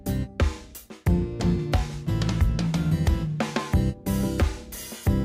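Nothing here stands out as a technical fault; the audio just runs along without any glitch worth pointing to.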